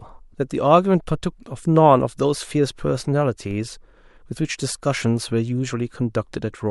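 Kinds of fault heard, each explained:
DC step: a single low thump at 3.51 s while the speech carries on untouched. The waveform's zero line suddenly jumps by about -29 dBFS, as when a converter recalibrates, and the offset then drains away through a 5 Hz high-pass.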